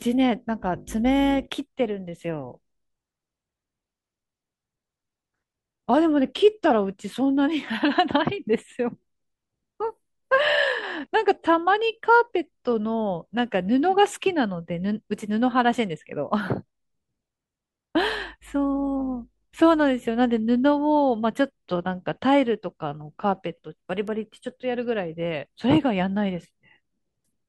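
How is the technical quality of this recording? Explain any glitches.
The speech has one glitch. At 24.08 s, a bit error spike: a single sample, flipped by one bit, jumps to about -20 dBFS and returns, heard as a sharp tick, shown as a one-sample needle and a thin full-band vertical line.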